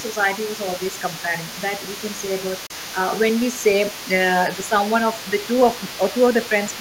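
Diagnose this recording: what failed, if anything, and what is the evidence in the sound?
There's a DC offset across the whole clip, a constant shift that pulls the waveform off zero. You won't hear it, but it eats headroom and shows up as steady energy right at the bottom of the spectrum. That points at the analogue front end or converter stage.

The call processing is dipping the speech in short bursts at 0.0–0.16 s, 0.76–0.98 s, 2.18–2.22 s and 4.55–4.73 s. Most dips are about 5 dB, and the one at 4.55 s reaches about 10 dB. This is likely speech suppressed in double talk, with the echo canceller ducking the near talker while the far end is active.

Under the main speech for the entire clip there's a second voice, sitting about 15 dB down. That's likely the other side's voice leaking through. The far end plays out of a loudspeaker and the echo canceller never fully removes it from the mic.

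At 2.66–2.71 s there's a hole of about 30 ms, and the speech resumes as if it had kept playing underneath. That's likely a Bluetooth dropout on the playback link, and the gap fits a couple of packets missing their delivery deadline.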